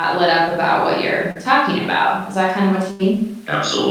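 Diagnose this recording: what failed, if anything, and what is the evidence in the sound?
Network stage: short concealed packet loss at 1.31 to 1.37 s. About 40 ms never arrived, and the decoder extended the preceding speech across the gap, leaving a brief smear.

Network stage again: a burst of packet loss from 2.91 to 3.01 s dropped 80 ms. Concealment held the last sound while fading it, then speech resumed further on.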